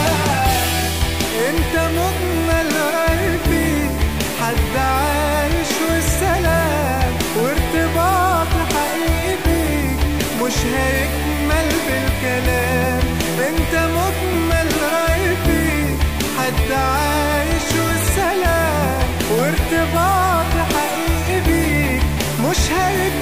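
A harsh, buzzy distortion runs through the whole recording, and quiet passages never fall silent but sit under a steady bed of noise. This is the sound of a stuck bit, likely from a broken data line or converter. About half of all sample values are displaced by a fixed step of roughly -30 dBFS, tracking the waveform's shape. Because that bit also flips with the sign of small values, the pauses fill with noise at that level.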